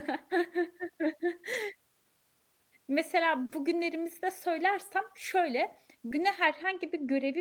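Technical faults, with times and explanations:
1.53–1.55 s, 3.49–3.51 s and 6.21–6.23 s: lost packet rebuilt from error correction. Each 20 ms packet was replaced by the low-bitrate copy carried in the next packet, so there is no gap, but those moments sound briefly rougher and noisier.
3.45–3.51 s: short concealed packet loss. About 40 ms never arrived in time, so the decoder extended the preceding sound, heard as a brief smear or wobble before the real audio returns.
6.45–7.41 s: de-emphasis applied wrongly. An unneeded treble cut tilts the response downward, about 11 dB lower at 10 kHz than at 1 kHz, so this closing stretch sounds dull and muffled.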